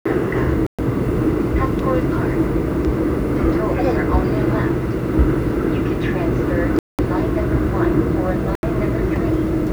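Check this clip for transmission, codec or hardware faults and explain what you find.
Two faults are audible: a coarse grain over the whole recording and three brief dropouts to silence.

Throughout the clip, a gritty, grainy distortion clings to the sound and changes character as the sound changes. It becomes most obvious in quieter moments, where the texture turns rough and sputtery. The likely cause is low bit depth without dither. The signal appears to have been rounded to about 8 bits with no dither noise added. The rounding error therefore follows the waveform instead of forming a steady hiss, and it sits only a few tens of decibels below the sound itself.

At 0.67 to 0.79 s, 6.79 to 6.99 s and 8.55 to 8.63 s, the audio cuts abruptly to silence and then resumes. The gaps last about 121 ms, 199 ms and 79 ms. This fits a likely Bluetooth stall. Radio interference would have delayed the packets, the receiving buffer ran empty, and playback halted until the retransmitted audio arrived.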